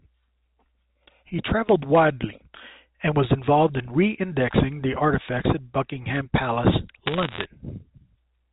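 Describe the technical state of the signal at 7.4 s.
At 7.4 s the signal is near the end of a burst of bit errors on a digital phone line, running from about 7.06 to 7.44 s. Around one bit in a hundred is flipped in the G.711 stream, and each flip corrupts a single sample. Hits on the sign or upper bits produce sharp ticks, heard as crackle over otherwise unchanged speech. On a waveform these show as isolated one-sample spikes. A spectrogram shows thin vertical broadband lines reaching the 4 kHz telephone band edge.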